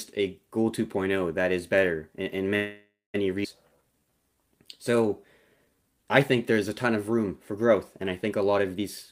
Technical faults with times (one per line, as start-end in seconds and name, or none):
2.55-3.16 call audio freeze
3.44-3.46 skip ahead
3.69-5.08 jitter buffer slow-down
5.56-6.54 jitter buffer slow-down